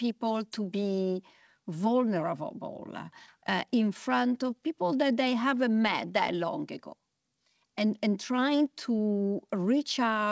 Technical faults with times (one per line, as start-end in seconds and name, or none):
none